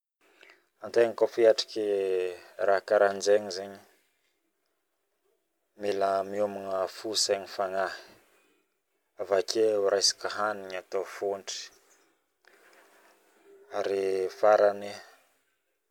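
Speech recording with no audible technical faults at any point.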